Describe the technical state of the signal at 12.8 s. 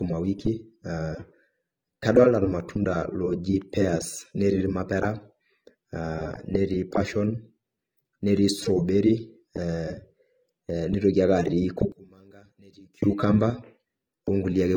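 At 12.8 s the audio sits inside a one channel inverted span running from 11.92 to 13.02 s. One side has likely had its polarity flipped, so the shared centre content cancels in a mono sum. The level drops by about 28 dB, leaving a faint residue. A waveform would show a sudden collapse in amplitude, and a spectrogram would show a dim band across that stretch.

Underneath this, the whole clip shows low-bitrate audio saved at a high bitrate. The file is a 192 kbit/s MP3, but the smeared, coarse texture of a much lower-rate encode remains, which fits an earlier pass around 32 kbit/s, likely AAC. On a spectrogram, the high-frequency detail looks patchy rather than filled in.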